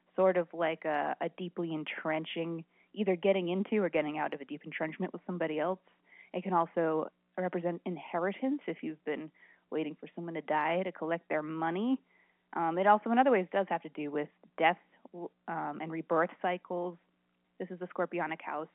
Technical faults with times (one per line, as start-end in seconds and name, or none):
none